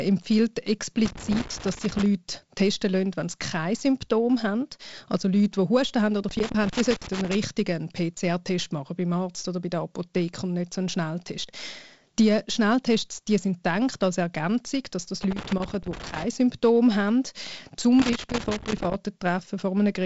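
Speech with loose connector crackle. Irregular scratchy bursts occur at 1.05–2.06 s, just before "testen lassen wenn sie", and at 6.29–7.35 s, after "haben oder". They recur at 15.23–16.24 s, after "dass das", and at 17.99–18.95 s. A worn contact is making and breaking, chopping the signal. The band stops near 7.7 kHz, consistent with G.722 wideband coding.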